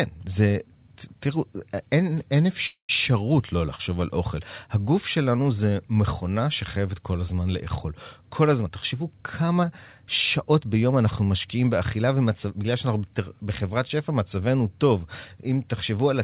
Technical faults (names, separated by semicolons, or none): call audio freeze; jitter buffer speed-up